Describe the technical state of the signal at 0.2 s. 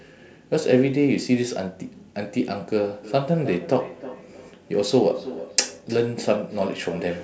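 At 0.2 s the speech signal is intact, with no fault present at that moment.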